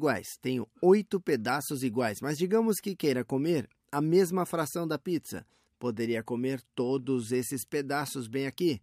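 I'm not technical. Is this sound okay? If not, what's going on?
Yes, the recording is technically sound, with no glitches, dropouts or distortion anywhere in it.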